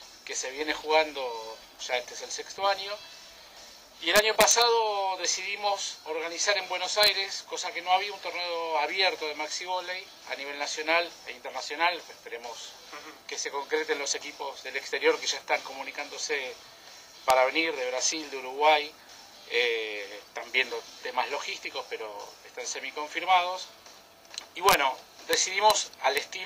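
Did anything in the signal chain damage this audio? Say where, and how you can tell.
Yes. Integer overflow in a fixed-point gain or sample-format conversion stage produces harsh cracks at 4.16–4.62, 7.03–7.08, 17.30, 24.69–24.74, 25.33, 25.70 and 26.17 s. Peaks exceeding full scale wrap to the opposite sign instead of limiting, which shows as vertical full-range jumps in the waveform and broadband spectrogram stripes.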